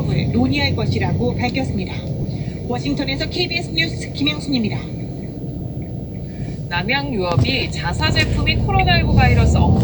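Lost LE Audio frames at 2.22–2.25 s, 5.59 s, 7.59–7.62 s and 9.14–9.17 s: gaps of about 30 ms, 20 ms, 30 ms and 30 ms, fitting two or three 10 ms frames, where the decoder refilled the last spectrum with random signs, smearing tonal sound into brief noise.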